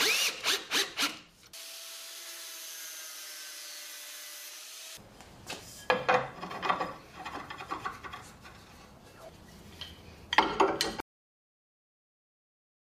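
At 11.00 s the sound is cut off mid-event: a cut-off end. The final buffers never played, so it drops straight to digital silence, with no decay.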